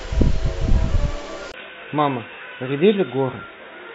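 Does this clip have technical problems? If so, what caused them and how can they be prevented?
Yes. At 1.52 s the speech goes dull and boxy after a short gap of about 20 ms, and it stays that way to the end. Nothing above 3.8 kHz comes through, the level drops by a few dB, and a new background hiss appears well below the speech. This is likely an input switched to a poorer device. A simple low-pass filter would not bring a gap, a new noise floor and a level change all at once. To prevent it, lock the recording input to one microphone and turn off automatic device or headset switching.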